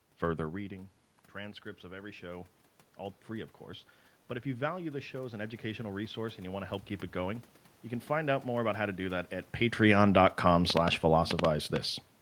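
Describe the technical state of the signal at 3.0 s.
At 3.0 s the speech and the room noise behind it are swelling together, a slow lift from 1.81 to 3.6 s just after "further reading transcripts". This is automatic gain rising: after the input fell by about 15 dB, the gain control gradually added about 3 dB.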